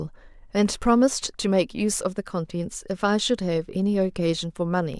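From 0.34 to 4.94 s, word clock ticks, around seven sharp clicks roughly every 0.7 s, from an unlocked receiver clock drifting about 50 ppm and slipping single samples.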